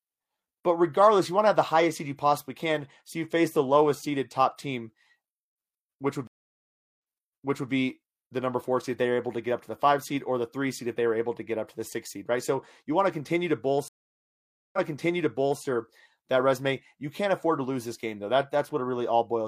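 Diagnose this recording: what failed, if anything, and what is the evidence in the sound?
Stream reconnect at 6.27 s after "which would" and at 13.88 s after "want to continue to" (network stage): silences of 0.5 s and 0.85 s, then a fresh decoder resumes 0.93 s and 0.88 s earlier, replaying audio.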